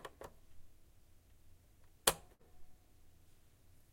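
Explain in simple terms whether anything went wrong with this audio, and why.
A burst of packet loss at 2.33 to 2.41 s: data was lost or arrived too late, so the player stretched the last sound into a fading tail, skipping 60 ms.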